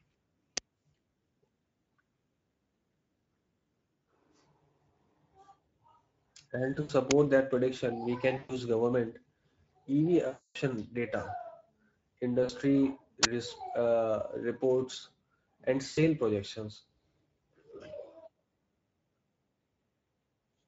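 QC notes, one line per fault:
Throughout: Speex codec. Speech sounds noisy and hoarse, with a thin, noise-filled top band. Few bits for the excitation cause this, which fits a bitrate near 17 kbps.
0.57 s, 7.11 s, 13.23–13.25 s: uninitialised buffer. Loud cracks, the last a burst of digital noise lasting about 20 ms. Leftover memory played as samples causes this. The 7.11 s burst falls just before "that prediction we".
6.73–6.92 s, 8.37–8.55 s, 10.27–10.56 s, 12.43–12.51 s, 15.89–15.98 s: VoIP packet loss concealed by the speech codec. Sound smears into a fading buzz. The decoder extrapolates lost audio, up to 280 ms at 10.27 s. The first gap ends just before "that prediction we", and the second follows those same words.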